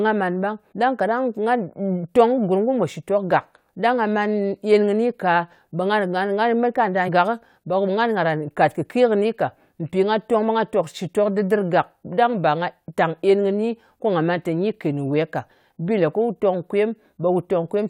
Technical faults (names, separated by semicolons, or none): damaged data in a compressed stream